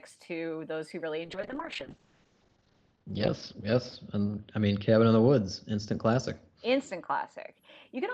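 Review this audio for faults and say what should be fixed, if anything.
A call bitrate drop runs from 1.25 to 7.58 s, after "to those who really". Coarser coding and an 8 kHz high-frequency cut make the speech rough and muffled, which fits a fall from about 32 to 9 kbps. Secure steadier network bandwidth so the estimate holds.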